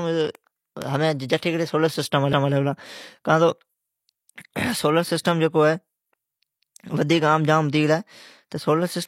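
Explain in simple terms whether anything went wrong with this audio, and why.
Something did go wrong, at about 2.33 s. The speech was handled in 4-second chunks, and the next chunk began before the previous one had finished. This fault is called overlapping chunks. The last 200 ms of sound before the join, from 2.33 to 2.53 s, is played a second time. It comes across as a brief stutter, as if the recording skipped back a fraction of a second and repeated itself.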